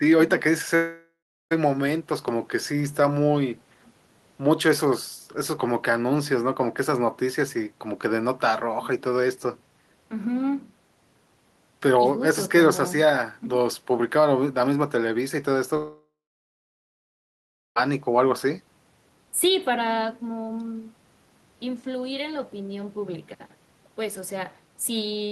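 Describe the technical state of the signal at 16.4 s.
A long network dropout runs from 15.77 to 17.78 s, so at 16.4 s the signal carries no real audio. This is likely a stretch of about 2 s of the stream that never arrived. The receiver briefly extended the last sound as a fading buzz or hiss for roughly a third of a second, then fell back to silence for about 1.6 s. Speech resumes at 17.78 s with the missing portion simply gone.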